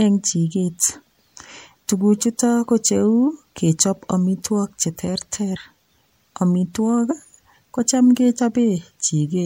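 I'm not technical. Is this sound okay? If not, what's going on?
No. The speech skips forward three times, at about 5.55, 7.10 and 8.38 seconds. Each time, a tiny slice of sound vanishes and leaves a short smeared blip rather than a sharp click. This is compressed frames skipped. The file stores audio in small blocks of about 26 milliseconds, and a few blocks were lost or rejected as damaged. The first jump drops roughly 50 milliseconds, about two blocks, and the later two drop roughly 30 milliseconds, about one block each.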